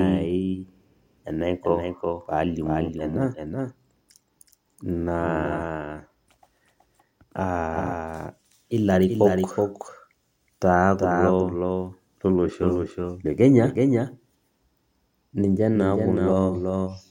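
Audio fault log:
throughout: doubled audio track. A second full-band copy of the speech trails the original by roughly 400 ms, about 5 dB quieter, likely from a slower capture path mixed back in. Unlike echo or reverb, there is one exact copy with no decay or room colour.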